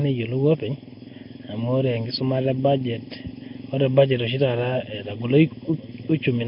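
Speech, with two faults running throughout. One channel arrives late by well under a millisecond and is summed to mono against the other, so channel delay (comb filtering) cuts evenly spaced notches starting near 1.5 kHz, leaving the sound hollow and phasey. The heavy coding damage points to a likely cause in Nellymoser compression at a low bitrate near 22 kbps. It leaves nothing above 5.3 kHz and gives the speech a rough, hissy, smeared underwater quality.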